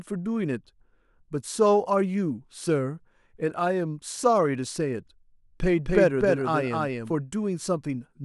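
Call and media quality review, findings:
Doubled audio track, 5.84–7.12 s: speech repeats around 300 ms behind, at near-equal level, full-band and dry, starting and stopping abruptly. Not echo or reverb: no decay or room colour. Likely a second capture path or misaligned edit.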